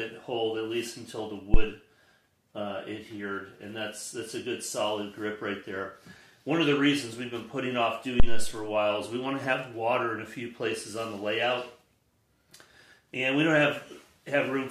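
Phantom power thumps land at 1.54 to 1.67 s and again at 8.20 to 8.59 s. Each is a deep low-frequency thud peaking around -7 dBFS, decaying over 28 ms and 87 ms, as a supply step switched on a live input passes through the coupling capacitors.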